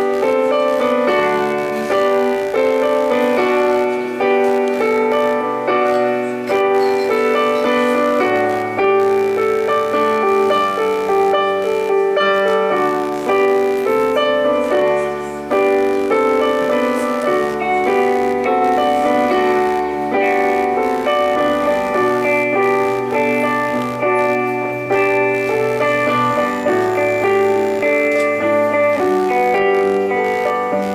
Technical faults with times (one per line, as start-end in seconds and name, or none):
0.00-30.94 computer activity noise